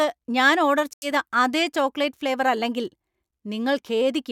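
At 0.93 s the speech cuts to silence for about 88 ms and resumes by 1.07 s. This is a Bluetooth stall, likely from radio interference delaying packets until the headphone buffer emptied and playback waited for resends. Unlike a codec dropout, nothing is smeared, repeated or concealed. The gap is silence with an abrupt restart.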